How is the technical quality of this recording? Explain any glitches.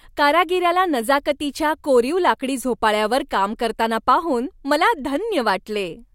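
No glitches can be heard anywhere in the recording. There is nothing in it that needs explaining.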